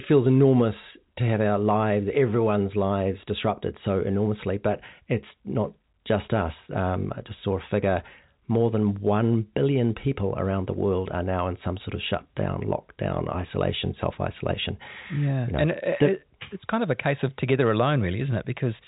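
Nothing stood out on listening to this speech, which comes through the G.711 telephone path with its usual narrow band and nothing above about 3.8 kHz.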